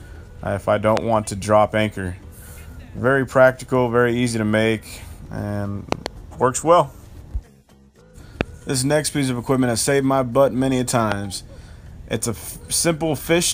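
Sharp loud pops punch through at 0.97 to 0.99 s, 8.41 to 8.43 s and 11.12 to 11.14 s, with a quick double pop between 5.92 and 6.08 s. Each jumps roughly 20 dB above the surrounding audio while the sound continues beneath it. The likely cause is a sudden voltage pulse, from a switch, plug contact, static discharge or driver glitch, added to the signal and briefly shaped by the downstream circuitry.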